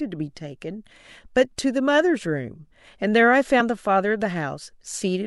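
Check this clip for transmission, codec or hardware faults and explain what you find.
One codec fault is present. At 3.60 s, compressed frames skipped: about two frames of 26.1 ms each, roughly 50 ms of speech, never play, so the audio jumps ahead. Overlapping neighbouring frames smear the join into a brief blip, with no silent gap as in a dropout and no hard click.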